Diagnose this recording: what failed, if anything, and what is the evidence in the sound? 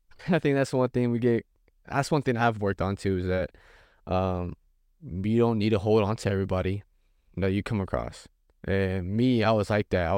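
Nothing in the speech recording indicates a failure at any stage of the chain, and there is no audible defect to report.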